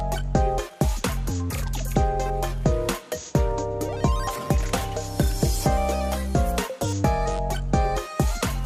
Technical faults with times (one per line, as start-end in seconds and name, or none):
none